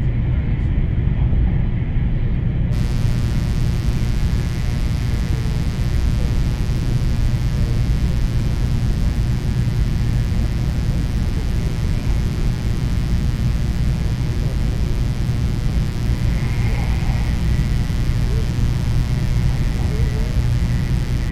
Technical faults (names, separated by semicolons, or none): mains buzz